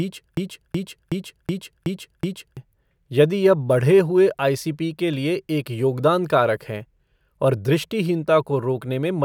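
Right from the start the speech is caught in a broken-record loop that's already running when the clip opens, and it carries on until about 2.57 s. A fragment of roughly 0.37 s plays back to back, identical each time, six times over, so you hear the same snippet stuttering with no progress. The likely cause is a stalled player or stream that kept re-sending the last piece it held, and whatever should have played during those first seconds is simply gone.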